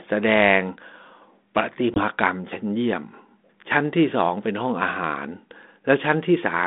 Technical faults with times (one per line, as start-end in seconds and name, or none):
1.94-2.01 packet loss on an ADPCM call